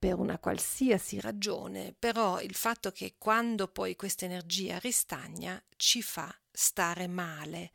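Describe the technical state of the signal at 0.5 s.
At 0.5 s the speech signal is intact, with no dropout, distortion, clipping or other fault audible at that moment.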